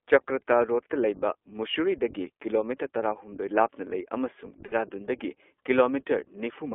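The whole clip runs through the iLBC codec, so the speech sits in a narrow phone band of roughly 300 Hz to 3.4 kHz with nothing above. The coding roughness is plainly audible, a slightly synthetic, gritty edge that fits iLBC's 15.2 kbps mode with 20 ms frames.

Right after "ꯂꯥꯞꯅ ꯂꯩ ꯑꯃꯁꯨꯡ", from 4.66 to 4.74 s, you get lost iLBC frames. About 60 ms goes missing, which fits three dropped frames. The decoder fills the gap by repeating the last pitch cycle with some noise, so it sounds like a brief buzzy held vowel before the speech snaps straight back.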